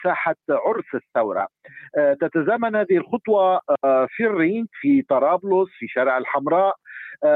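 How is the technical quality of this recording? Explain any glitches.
The signal holds together throughout, with nothing in it that points to a fault anywhere in its capture, processing or playback.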